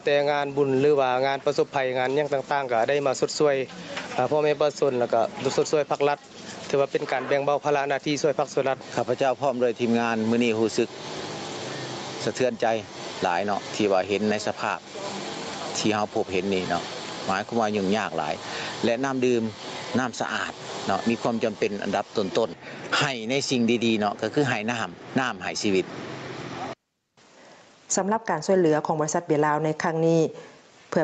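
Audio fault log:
Throughout, gain pumping: gain swings about 15 dB, squashing loud and soft parts closer in level, likely a fast limiter fighting excessive input gain.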